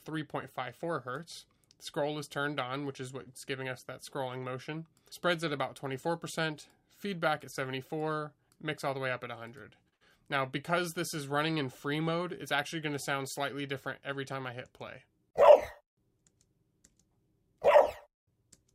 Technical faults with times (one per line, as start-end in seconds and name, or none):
3.23-3.28 short stall from a late packet
9.89-9.94 short stall from a late packet
9.94-10.02 burst of packet loss